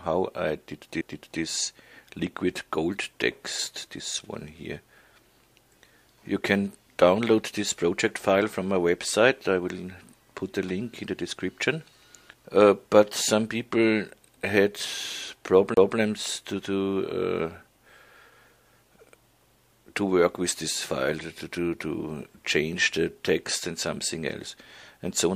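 The audio has two CD skips, at 1.01 s and from 15.74 to 15.77 s. Each is a brief tick or mute, a few milliseconds at the first and around 30 ms at the second, after which playback resumes from a different point because the laser jumped onto another turn of the disc's spiral. That jump in position separates a CD skip from a simple dropout, where the sound would pick up where it left off.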